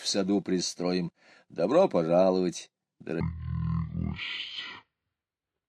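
From 3.21 s to the end, a section at the wrong speed plays at 0.503 times normal, likely from a clock mismatch. Sound turns deep and slow, about ten semitones down.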